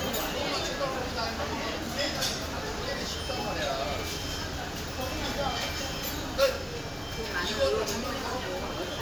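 No technical faults can be heard in this recording.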